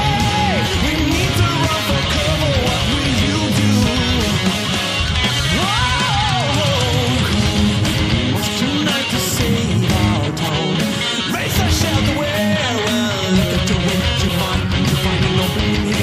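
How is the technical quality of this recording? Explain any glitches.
Two brief glitches stand out, both of the same kind. At 0.65–0.67 s and again at 10.47–10.49 s, the sound breaks into a short blip. This is damaged data in a compressed stream: corrupted bytes make the decoder misread those frames and lose sync until it finds the next valid frame header.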